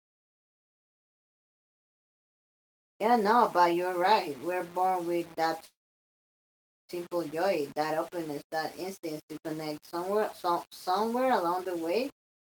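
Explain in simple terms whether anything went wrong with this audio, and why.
Yes, two things went wrong. Low bit depth without dither: the sound was likely stored with too few steps, which fits 7-bit audio rounded with no smoothing noise. Throughout the speech the rounding error follows the voice, giving a grainy, gritty roughness that is worst in quiet parts.

A call audio freeze also occurs from 5.65 to 6.91 seconds. Data likely got held up in transit, so the receiving end ran out of sound to play. For about 1.2 seconds the audio stalls, almost all of it silence, then resumes exactly where it stopped, with nothing lost but everything afterwards arriving late.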